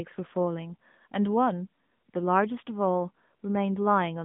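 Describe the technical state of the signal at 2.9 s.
At 2.9 s the speech sounds boxed-in, plainly buzzy and synthetic, with nothing above about 3.7 kHz and a line band of 150 Hz to 3.6 kHz throughout the clip. This is the AMR narrowband mobile codec, whose pulse-driven vocal-tract model fits a mid-rate mode near 10.2 kbps.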